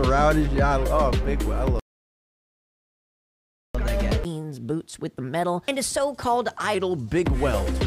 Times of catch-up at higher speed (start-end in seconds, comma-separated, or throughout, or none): 3.75-6.75